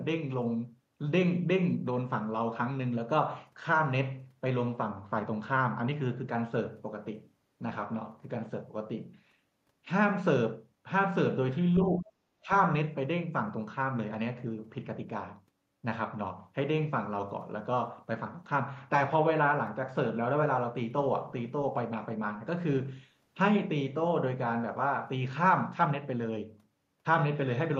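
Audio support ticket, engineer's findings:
Speech suppressed in double talk, 11.77–12.15 s and 12.4–12.5 s. Speech level drops by about 20 dB, in pieces. Waveform shows an abrupt envelope notch. Spectrogram shows a band-wide gap. Likely cause: an echo canceller confusing local speech with far-end echo and attenuating both.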